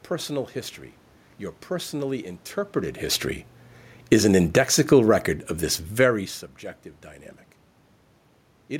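From 3.97 to 5.09 s the automatic gain falls. The gain control judged the input too loud or its background noise too strong and eased its gain down by about 5 dB, so the speech sinks along with the room noise behind it, unlike the talker's own movements near 2.5 and 6 s.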